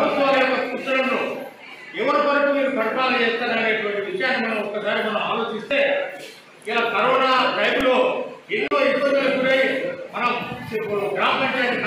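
A repeated buffer at 7.81 s makes a brief buzz-like click. New audio arrived late, so the device replayed its last tiny block three extra times with hard joins. The roughly 1.5 ms repeat length fits a 64-sample buffer, and a few milliseconds of sound are lost.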